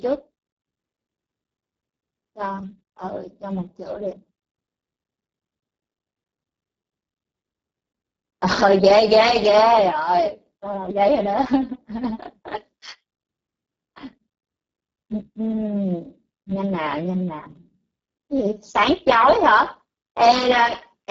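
From start to finish the speech carries heavy Speex codec damage. The CELP coder is starved of excitation bits, which fits a bitrate near 6 kbps, so the voice comes out hoarse, noisy and edging toward robotic.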